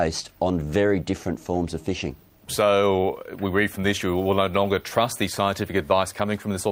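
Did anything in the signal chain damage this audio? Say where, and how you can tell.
No, nothing in the signal chain damaged this audio.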